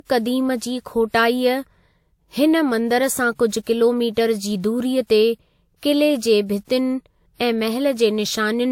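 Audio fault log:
Throughout, transcoding between lossy codecs: the speech has a dull top with nothing above 16.5 kHz, plus two different kinds of compression grain heard together. This likely comes from encoding the sound once, roughly as Vorbis at a modest bitrate, then re-encoding it as WMA at a somewhat higher one. The second codec spent bits preserving the first one's artefacts and added its own, while the lowest band limit in the chain remained.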